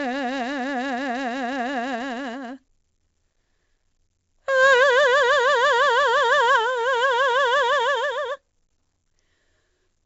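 4-bit ADPCM compression runs through the whole music clip, and the damage is heavy. Each sample is stored only as a coarse 4-bit step away from a predicted value, with the step size adapting as the music moves, so the error becomes a gritty hiss that rises and falls with the level. Sharp attacks smear and distort where the step lags behind. Nothing remains above 7.8 kHz, leaving the sound dull, which fits a 64 kbps stream.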